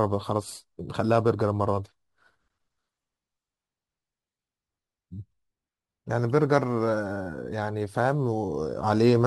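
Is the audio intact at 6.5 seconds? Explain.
No. At 6.5 seconds the speech carries crude rate conversion, which runs through the whole clip. The sound points to a change from 48 kHz to 44.1 kHz done by simply taking the nearest sample, with no filtering. Samples are dropped in a fixed repeating pattern, and that timing error creates shifted, inharmonic copies of the speech, about 35 dB below it. It is heard as a gritty, inharmonic fizz that rides on louder and brighter sounds.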